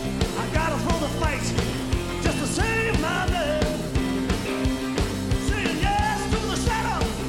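No technical faults can be heard anywhere in the recording. There is nothing to place on a timeline, as the audio runs without any interruption or disturbance.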